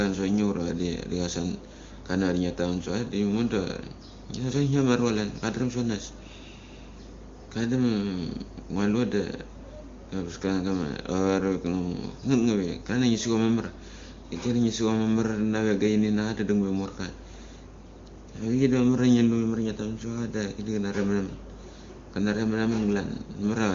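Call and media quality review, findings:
No faults found: the speech carries the band-limited character of AMR wideband (HD Voice) coding, with content ending near 7.1 kHz and only faint coding traces, which fits one of its highest bitrates, around 23.85 kbit/s.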